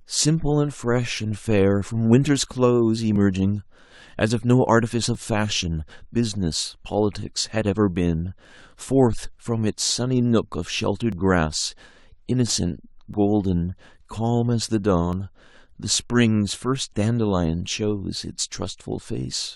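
Tiny skips at 1.17, 3.16, 5.15, 7.14, 9.13, 11.12, 13.14 and 15.13 s come from overlap between stream segments. Overlapping 2-second segments get trimmed, dropping real speech.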